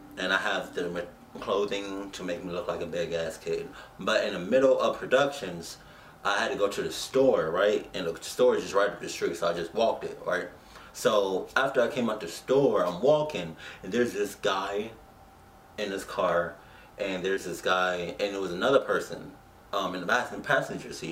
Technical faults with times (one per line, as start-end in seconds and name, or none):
17.35-17.38 short concealed packet loss